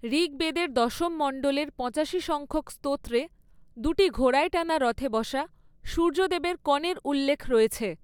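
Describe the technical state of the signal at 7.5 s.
At 7.5 s the speech signal runs intact, with no audible fault at that moment.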